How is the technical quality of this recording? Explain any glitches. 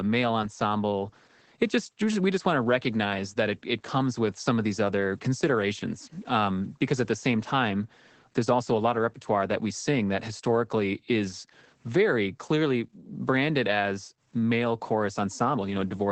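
Technical quality is limited by one fault running through the whole recording: Opus voice compression. The speech sounds muffled and hoarse, with nothing above about 8.7 kHz. The coarse, robotic texture fits SILK wideband coding at a low bitrate near 12 kbps.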